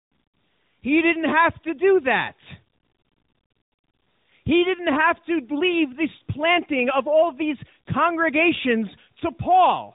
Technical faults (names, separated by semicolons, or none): tandem speech coding